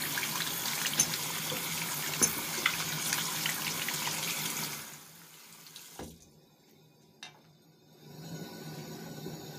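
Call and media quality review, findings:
No audible faults found; no action needed.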